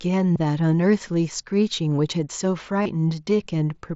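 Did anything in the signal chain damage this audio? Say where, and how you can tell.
Yes. Concealed Bluetooth headset packet loss on the wireless link: two 30 ms buzzy held patches at 0.33–0.36 s and 2.83–2.86 s, where the receiver repeated recent waveform over the lost packets.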